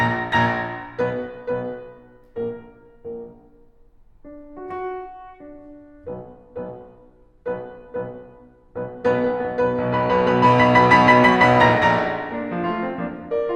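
Music, with no audible faults.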